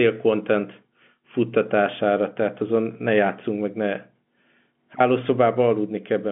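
No technical faults are audible.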